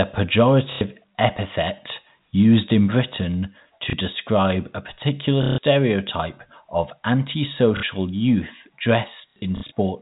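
Packet loss with last packet repeated hits at 0.72 s before "epithet used in", 3.9 s before "describe a particular", 5.43 s after it, 7.77 s, and scattered through 9.3 to 9.72 s. The stored packet replays. Longer gaps, up to 150 ms, buzz near 33 Hz, fitting 30 ms packets, under the 4 kHz telephone band.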